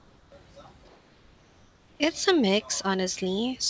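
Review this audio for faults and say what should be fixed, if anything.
From 0 to 0.32 s and from 0.88 to 2.0 s, the room background becomes a smooth, detail-free hiss, about 3 dB and then about 2 dB quieter. This is likely comfort noise in place of the background: the sender's voice detector stopped transmission and the receiver synthesised filler. A noise gate would leave silence instead. Turning off discontinuous transmission at the sender would keep the real background through pauses.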